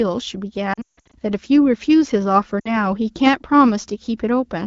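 Lost AMR speech frames, frames failing their checks after radio errors, hit this speech clip at 0.73–1.15 s and 2.59–2.72 s. The decoder extrapolated from the last good frame with falling gain: the first stretch, about 300 ms of gaps over 400 ms with a longest run of 160 ms, smears and fades out. The second, about 60 ms, fits three 20 ms frames and gives a brief warble over the wideband AMR-WB audio at 12.65 kbit/s.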